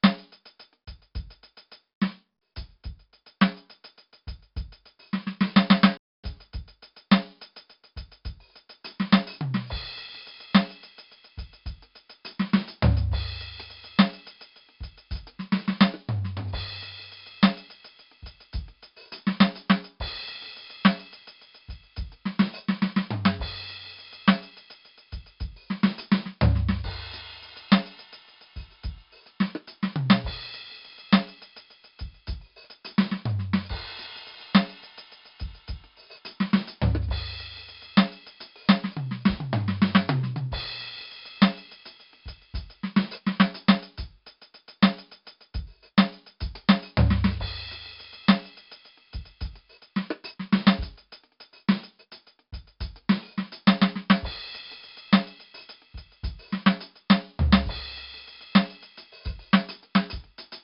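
A music recording damaged by heavy 4-bit ADPCM compression throughout: a gritty hiss rides on every loud passage, sharp attacks come out distorted where the step size lags behind, and nothing is heard above 5.3 kHz, which fits a low sample rate near 11 kHz and roughly 44 kbps. A playback stall drops the output to silence from 5.97 to 6.24 s, about 0.26 s, before the music resumes, most likely because the player ran short of data or its thread was blocked.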